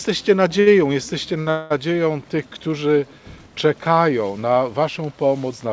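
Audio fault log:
0.60–0.68 s and 1.40–1.48 s, short stall from a late packet: a packet arrived late and the jitter buffer ran empty, so the last sound is held for 64 ms and 58 ms, then resumes with nothing lost.
1.50–1.72 s, call audio freeze: packets were likely held up on the way, emptying the jitter buffer. The last sound carries on as a fading buzz or hiss for 202 ms, then continues from where it stopped, with nothing missing.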